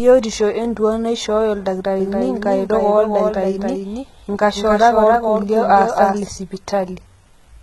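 HE-AAC compression runs through the whole clip, and the speech shows heavy damage. The codec likely kept only the lower spectrum and rebuilt the treble by copying lower bands upward under a coarse envelope. The result points to a very low bitrate, around 16 kbps. Nothing reaches above 11.8 kHz. The synthetic top end sounds wrong, with harmonics that fail to line up, so the s sounds come out gritty, metallic and lispy.

A doubled audio track appears from 2.00 s to 6.28 s. A second full-band copy of the speech trails the original by roughly 300 ms, about 5 dB quieter. The likely cause is a second capture through a slower path, or an edit leaving two out-of-step copies. The copy carries no decay or room colour, so it sounds like a flat, detached echo, and it cuts in and out abruptly at both ends.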